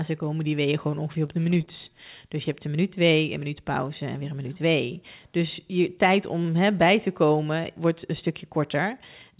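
Repeated packet loss (robotic sound) runs from 1.26 to 1.69 s, right after "die weeën gewoon ongeveer". Audio went missing four times in quick succession, the longest hole about 22 ms. Each gap was patched by stretching out the sound just before it, and about 16% of that stretch is this filler. The speech turns choppy, with small pieces dropped between the patched bits.

A jitter buffer slow-down follows from 1.89 to 2.29 s. To build up a reserve, the receiver repeated single pitch cycles and bits of pause, adding 38 ms to the passage. Speech there plays at 93% of normal speed but keeps its pitch, so sounds come out slightly drawn out and sluggish. The band-limited call sound around both faults, with nothing above 4 kHz, fits a narrowband G.711-type codec.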